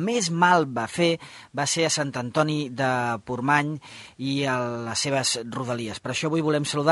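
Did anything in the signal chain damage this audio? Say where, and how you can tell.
No, no damage is audible.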